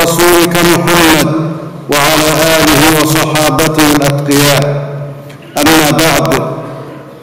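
Integer overflow runs throughout the clip. The signal is driven about 1 dB past the integer limit, and the loudest peaks, a small fraction of samples, wrap to the opposite sign instead of being held. Each one is heard as a sharp, violent crack on loud moments, harsher than clipping.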